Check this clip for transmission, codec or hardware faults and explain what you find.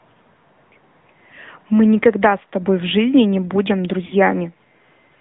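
Two faults are present: narrowband mobile coding throughout, and a brief dropout near the end.

For the whole clip, the speech sounds boxed-in and buzzy, with nothing below 150 Hz or above 3.6 kHz and a plainly synthetic edge. This is the AMR narrowband mobile codec, which rebuilds speech from a vocal-tract model and sparse pulses. The degree of damage fits a mid-rate mode around 10 kbps.

From 4.06 to 4.14 s, the sound smears and sags for about 60 ms, then returns slightly rough. These are lost AMR speech frames: the decoder repeated its last good pitch and tract settings at falling gain, which fits three consecutive 20 ms frames going missing.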